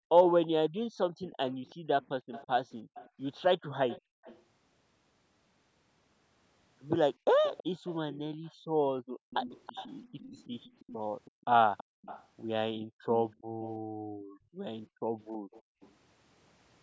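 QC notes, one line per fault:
QC notes, one line per fault:
0.00–4.23 s, 7.69–9.30 s and 11.31–15.80 s, background gated by the echo canceller: the room sound under the speech dips sharply, at its deepest by about 40 dB, then comes back. The dips add up to roughly half a second in each of the first two spans and about two seconds in the third. The canceller's suppressor pulls the microphone level down hard whenever it judges far-end audio to be playing, and the ambience drops out with it.
0.26–4.43 s and 7.43–15.92 s, echo leak: a faint second copy of the speech trails the original by 326 ms, sitting roughly 20 dB below it. The likely cause is a loudspeaker-playing endpoint whose echo canceller did not fully remove the audio its microphone picked back up, so the residue was transmitted back into the call.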